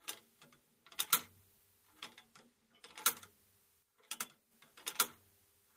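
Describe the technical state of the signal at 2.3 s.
At 2.3 s the audio is intact, with no dropout, distortion or other technical fault to be heard.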